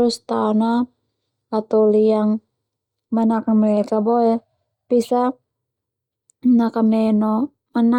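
A speech clip, and nothing is technically wrong with it.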